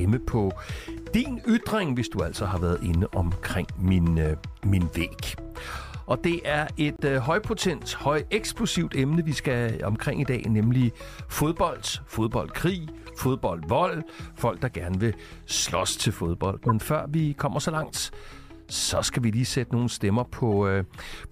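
At 6.96 to 7.00 s, damaged bits in the compressed stream left frames the decoder could not accept. The player replaced them with silence, a corrupt frame muted fault. The result is a hole of about 40 ms, which fits a couple of frames being dropped. It cuts in abruptly and the sound resumes on schedule, with no shift in timing.

Later, other damaged frames were decoded anyway. Their corrupted gains and codes placed energy at the wrong frequencies. This corrupt frame decoded fault shows up as short synthetic blips and bursts of noise, each lasting roughly as long as the frames involved. The first runs from 13.01 to 13.18 s, peaking at about -35 dBFS. A quieter one follows at 14.29 s, about -40 dBFS. At 16.66 to 16.71 s comes the strongest, at about -15 dBFS. The last is at 20.52 s, about -20 dBFS.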